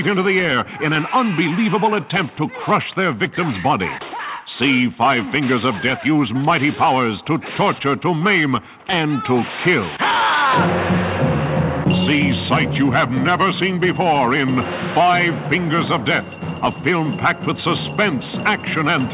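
No technical faults are audible anywhere in the audio.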